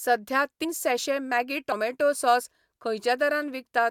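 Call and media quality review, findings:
Compressed frames skipped at 0.63 s, just before "सैैशे मॅगी", and at 1.71 s, just after "सैैशे मॅगी". Speech jumps ahead, roughly 150 ms and 50 ms lost. Decoder or transport drops whole frames.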